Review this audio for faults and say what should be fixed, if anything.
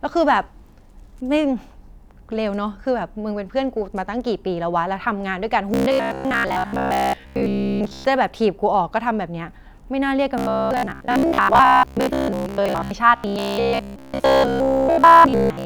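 Audio likely arrived too seldom, so roughly 15 ms buffers repeated. The result is robotic sound from repeated short buffers: a metallic 66.8 Hz buzz at 5.74–8.05, 10.38–12.91 and 13.16–15.65 s. Larger jitter buffers and steadier delivery would prevent it.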